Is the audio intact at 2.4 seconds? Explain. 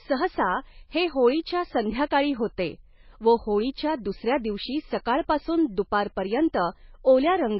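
No, not really. At 2.4 seconds the speech has the same damage it carries through the whole clip, which is most likely heavy MP3 compression. Nothing comes through above 5.5 kHz, so the top end sounds dull and s sounds lose their edge. Weak frequency lines drop in and out from frame to frame, giving a watery, swirly texture. That fits a very starved bitrate, somewhere around 18 kbps.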